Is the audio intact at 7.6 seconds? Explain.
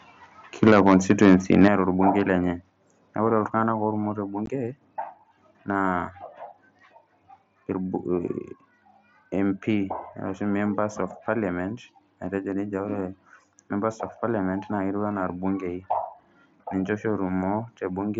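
Yes, the speech at 7.6 seconds is intact, carried through the Bluetooth mSBC headset codec with no fault at that moment.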